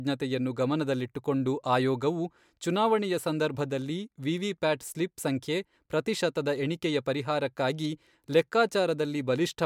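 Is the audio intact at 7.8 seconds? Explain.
Yes, the speech at 7.8 seconds plays through intact, with no audible fault at that moment.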